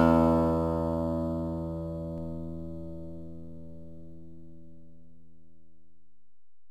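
Sounds here, with a DC step at 2.18 s: the waveform's zero line jumps by about -42 dBFS and stays offset to the end. You get a low thump or click at that moment, like a converter recalibrating or an offset input switching in, while the sounds carry straight on.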